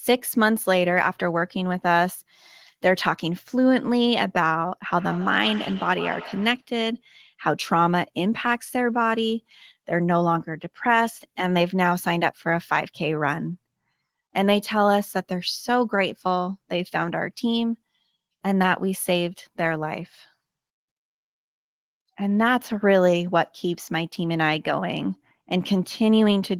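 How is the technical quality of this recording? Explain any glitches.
One glitch stands out. From 4.88 to 6.69 s there is feedback echo between two devices. A second device replays the speech into the microphone, so it returns about every 150 ms, thin and ringing, about 15 dB below the voice.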